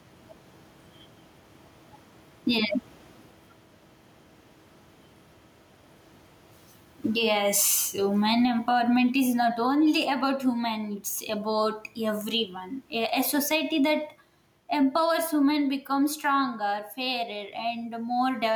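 Speech with gain pumping throughout, a gain swing of around 15 dB, with faint room noise at about 44 dB below the speech; the gain pumping likely comes from mic gain set far too high and a fast limiter clamping down.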